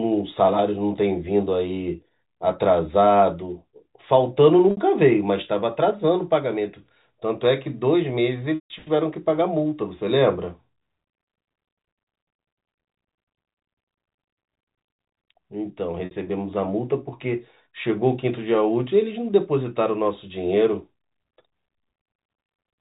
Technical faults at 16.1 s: packet loss with pitch repetition

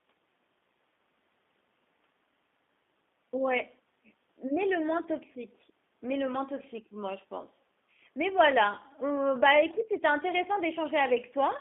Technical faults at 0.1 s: G.729 codec

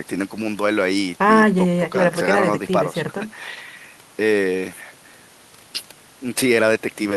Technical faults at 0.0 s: none

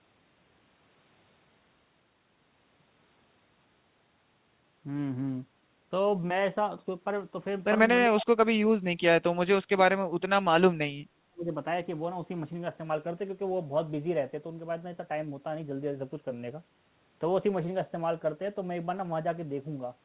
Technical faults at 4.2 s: none

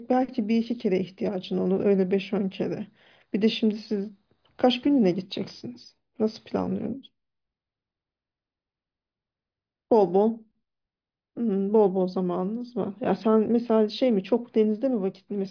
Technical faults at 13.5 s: none

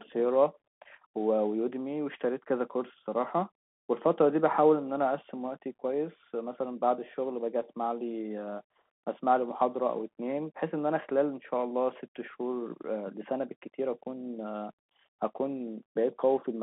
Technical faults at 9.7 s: Bluetooth CVSD headset codec

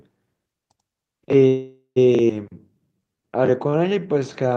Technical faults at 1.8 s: call audio freeze

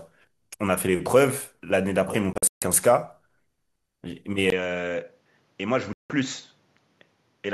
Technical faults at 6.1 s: input switched to a poorer device; digital broadcast dropout

